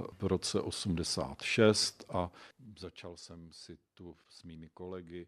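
It's a speech clip, and between 2.0 and 3.12 s there's zipper noise. The level drops by something like 20 dB, but it gets there in hard 3 dB jumps, around five a second, with no smoothing between them, so each jump leaves a small click and you hear a ticking zip riding on the voice until it settles just before "jsem si tu".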